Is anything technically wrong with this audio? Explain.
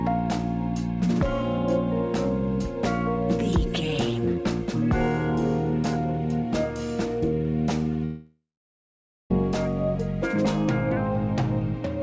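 Yes. A long network dropout runs from 8.05 to 9.31 s. About 1.25 s of sound is lost. The last sound stretches into a fading buzz, then roughly 0.87 s of near-silence. Packets likely stopped arriving, so the receiver filled the gap. The band stops at 8 kHz, which fits a G.722 call codec.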